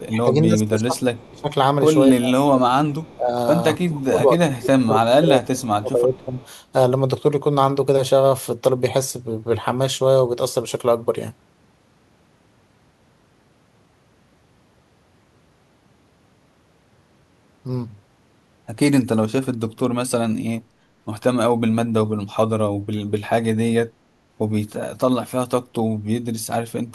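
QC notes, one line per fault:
0.01–1.5 s, 2.12–2.74 s, 3.15–3.35 s, 3.77–6.36 s and 23.76–23.97 s, speech suppressed in double talk: the talker's level sinks by about 20 dB in most runs, about 15 dB at 3.15 s and about 40 dB at 23.76 s. In the longest run roughly two seconds of speech is affected. The likely cause is an echo canceller ducking the near talker while the far side spoke.
1.15–1.3 s, 3.03–3.15 s and 6.14–6.46 s, echo leak: a faint copy of the voice returns 262 ms after the original at about 30 dB below the speech, in short scraps. This is likely residual loudspeaker pickup that the far end's echo canceller failed to remove. The fixed, distinct delay sets it apart from room reverberation, which smears continuously instead of repeating as a discrete copy.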